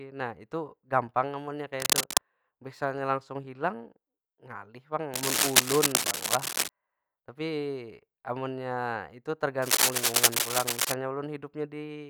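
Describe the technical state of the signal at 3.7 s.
At 3.7 s the speech signal is intact, with no dropout, clipping, glitch or other technical fault audible at that point.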